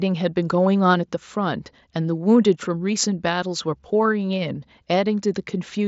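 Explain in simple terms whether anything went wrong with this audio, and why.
Nothing went wrong with this speech recording; it came through the Bluetooth headset link as that link normally sounds.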